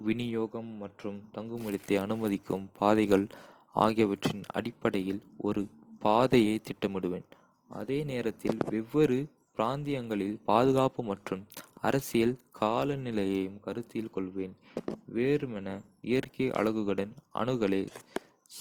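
Speech recording carrying plainly audible codec damage for its whole length, most likely from Opus compression running in its music-oriented CELT mode. The voice keeps its full bandwidth but sounds rough, grainy and noisy, as bands starved of bits get filled with folded or noise-like content, a texture that fits a rate around 24 kbps. Unlike MP3 damage, there is little watery swirl and few spectral holes.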